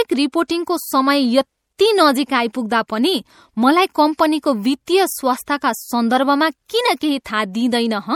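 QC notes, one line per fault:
throughout, MP3 compression: watery, swirly speech with metallic chirps on s sounds, likely from coding at a low bitrate such as 64 kbps.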